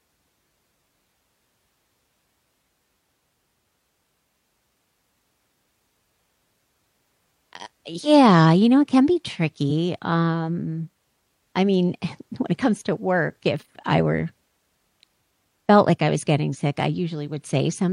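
Speech with two bursts of damaged data in a compressed stream, at 13.56–13.63 s after "it comes to work" and 16.49–16.56 s after "felt like I was": the decoder loses frame sync, producing brief disruptions.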